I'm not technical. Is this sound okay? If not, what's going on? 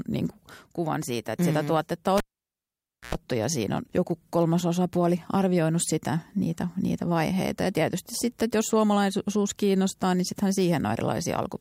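No. A cable was pulled and plugged in while live, around 2.18 to 3.15 s, after "sitä mm tuotetta": a pop, almost a second of silence, a short 60 Hz hum, then another pop before "ja siinä on joku".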